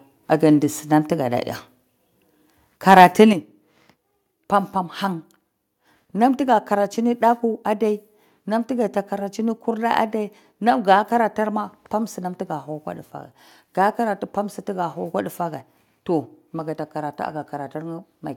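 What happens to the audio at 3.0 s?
Microphone overload from 2.9 to 3.05 s: likely excessive input gain drives peaks about 5 dB past the converter's limit, flattening waveform tops into harsh crackle.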